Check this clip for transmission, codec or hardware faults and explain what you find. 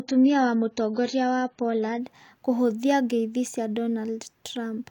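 One fault is present: an adaptive stream starting at a low bitrate, from 0.0 to 2.0 s. The player opened on a cheap version to start quickly, leaving nothing above 7 kHz and heavier artefacts, consistent with about 16 kbit/s AAC. At 2.0 s, just before "kũhũthia ngeithi cĩa", the treble returns abruptly, pointing to a step up to roughly 96 kbit/s. Unlike a dropout or reconnection, the change happens without any gap.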